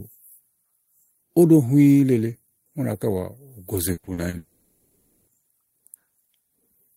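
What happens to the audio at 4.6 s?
Incoming audio likely stopped arriving from 4.37 to 5.29 s, a long network dropout. For those 0.9 s the receiver stretches the last sound into a fading buzz or hiss, never true silence, and speech resumes with that stretch lost.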